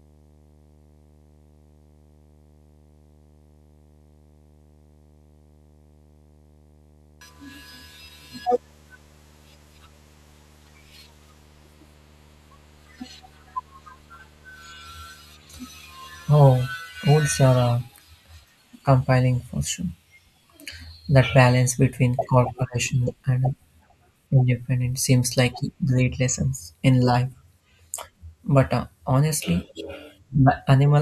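From the very start to about 16.71 s there's video or display buzz under the speech: a screen or video cable is leaking into the audio, giving a 75 Hz buzz at the picture's field rate with hash above it, sitting roughly 35 dB below the speech.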